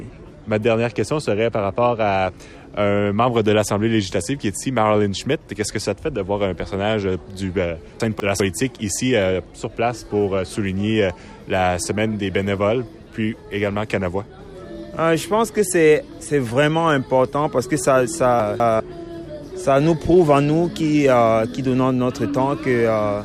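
Chunks out of order at 8.0–8.4 s and 18.4–18.8 s: a 200 ms chunk arrives one slot late, swapping places with its neighbour, so the sound jumbles briefly at the hard joins.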